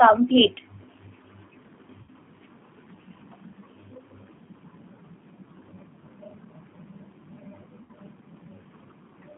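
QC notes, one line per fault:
throughout: G.729 codec. The band is confined to about 150 Hz to 3.5 kHz, and the speech has a rough, synthetic edge from low-rate pulse-excited filter coding, consistent with 8 kbit/s G.729A.
2.02–2.10 s and 7.83–7.92 s: VoIP packet loss concealed by the speech codec. About 60 ms is missing each time, which fits three lost packets. The decoder stretches the previous pitch and filter into a fading buzzy tone or coloured noise, then recovers weakly.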